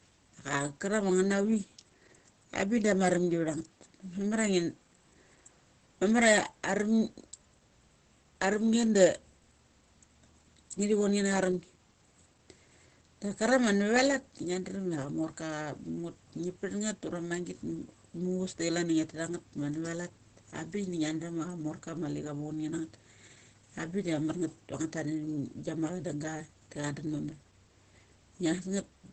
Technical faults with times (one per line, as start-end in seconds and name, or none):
0.00-29.12 Opus compression